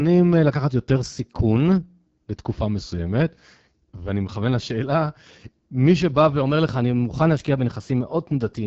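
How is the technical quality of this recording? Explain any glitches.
The recording has two problems: a low-rate speech codec that degrades the whole clip, and two brief speed-and-pitch shifts.

AMR wideband (HD Voice) codec, throughout: the speech carries the rough, raspy texture of AMR-WB at one of its lowest modes, consistent with about 8.85 kbit/s. The coder models the voice with pulse-excited vocal tract filtering up to 6.4 kHz and fills the top band with shaped noise. Nothing is present above 7.5 kHz.

Drift correction step, from 0.95 to 1.82 s and again from 6.43 s to the end: playback runs about 6.1% fast, raising pitch by roughly 103 cents, about a semitone. The likely cause is clock-matching software stepping the rate to rebalance its buffer.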